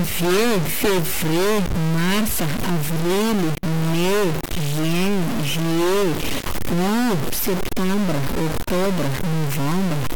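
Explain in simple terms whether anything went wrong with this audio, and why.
A harsh, buzzy distortion runs through the whole speech clip. Even the pauses hiss. This is likely a stuck bit, a fairly high one frozen in the digital data.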